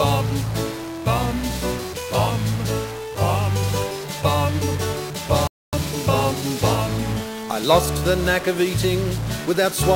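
From the start, the whole clip carries distortion, and quiet passages fill with hiss instead of falling silent. This sounds like a stuck bit, likely one converter data line held at a fixed value. Roughly half the samples land off by that bit's weight.

At 5.47 s the sound cuts to silence. It resumes at 5.73 s exactly where it stopped. This is a rebuffering stall. The player ran dry of downloaded audio and waited. Nothing is lost, but about 255 ms is added.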